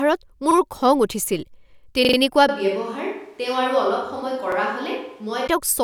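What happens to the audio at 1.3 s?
Nothing goes wrong at 1.3 s; the speech carries on intact through that moment, with no dropout, click, or other fault.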